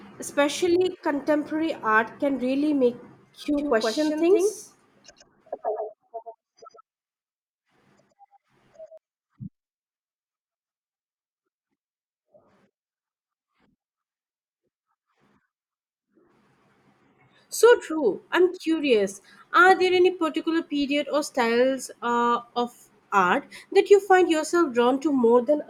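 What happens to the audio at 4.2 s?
At 4.2 s the speech is inside a doubled audio track that runs from 3.58 s to 8.98 s. A second, full-band copy of the same speech trails the original by around 100 ms at roughly 5 dB lower, likely from the signal being captured again through a slower path. The copy has no decay or room colour, so it sounds like a hard, flat slapback. It cuts in and out abruptly at the span edges.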